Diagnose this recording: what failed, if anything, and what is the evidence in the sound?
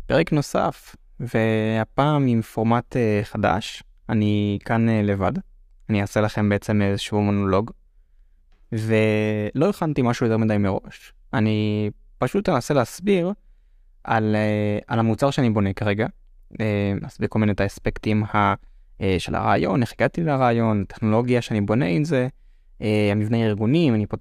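Nothing in the signal chain has failed: the speech signal stays continuous and intact throughout, with no audible disturbance from any stage between capture and playback.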